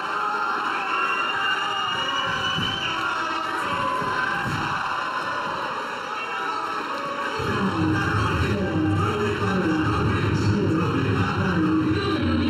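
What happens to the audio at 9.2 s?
Channel delay (comb filtering) is present at 9.2 s, as it is across the whole clip. One channel arrives late by roughly 0.7 ms, and when the two are summed to mono, shared content cancels at evenly spaced frequencies, the first notch sitting near 700 Hz and further ones repeating up the spectrum. At this moment the sound comes across as hollow and phasey, with fixed notches that stay put rather than sweeping.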